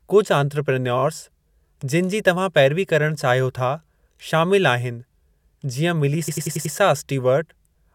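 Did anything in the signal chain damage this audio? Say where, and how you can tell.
Yes. The damage is at the codec or storage stage: repeated frames. At 0.98 s a 23 ms slice of speech plays twice more, ending at 1.02 s. That is a brief stutter that fits a single compressed frame. At 6.27 s a longer 93 ms block plays five extra times, up to 6.74 s, which fits a run of about four frames. The decoder was fed the same data again, so the clip runs about 0.5 s long.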